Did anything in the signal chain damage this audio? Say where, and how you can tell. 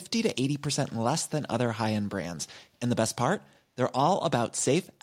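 Yes. At 0.88 to 0.93 s there is a brief echo leak: a short delayed copy of speech, trailing the original by about 255 ms and sitting far below the main speech level. This is likely a call-processing fault. One end played the call through a loudspeaker, its echo canceller let a scrap of that playback through from the microphone, and that residue was sent back down the line as a faint repeat.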